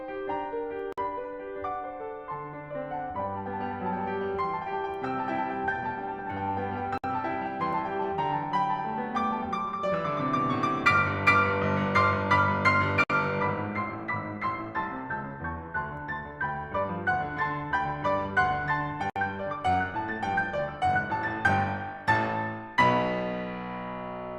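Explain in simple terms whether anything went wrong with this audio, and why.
Something did go wrong: the music drops out briefly four times, at 0.93, 6.98, 13.04 and 19.10 seconds, roughly every six seconds. Each silence lasts about 50 to 60 milliseconds, then the music resumes exactly where it stopped. This is a gap at a join of encoded pieces: the track was encoded in separate chunks and stitched together untrimmed, so each chunk's leftover start-up silence and end padding remain as a hole.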